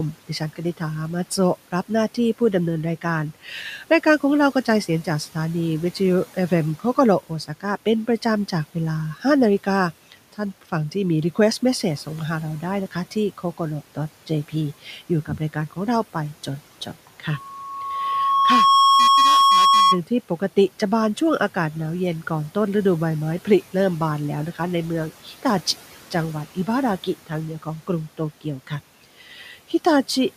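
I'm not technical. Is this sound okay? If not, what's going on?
No. From 17.33 to 19.99 s there is loudspeaker feedback squeal: a steady 1.1 kHz tone swells over about a second and a half until it is louder than the speech. The microphone is hearing its own loudspeaker. It is one pitch that grows on its own, not a passing whistle or hiss.

From 29.21 to 29.71 s you can hear speech cut by the noise suppressor. For a few tenths of a second the speech dips and sounds swallowed, because the noise-cleaning step took it for background. The sound goes faint rather than breaking up or stopping dead, and the quiet room noise is turned down along with it.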